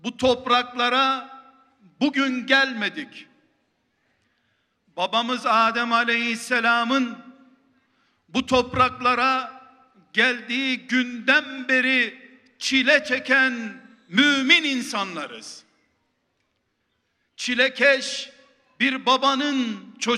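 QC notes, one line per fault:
No faults found. Nothing in the audio calls for a QC line.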